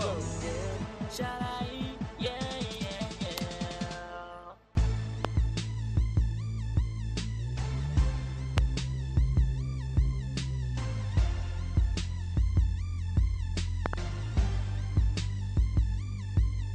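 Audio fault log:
5.25–5.27 s, 8.58–8.60 s and 13.86–13.96 s, loud pop: each is a sharp pop standing around 20 dB above the surrounding sound, with a double pop in the last span. The sound continues underneath. A sudden voltage step or pulse is likely, from a plug, switch, static discharge or driver glitch. It gets added to the signal, and the circuits after it shape it into a brief transient.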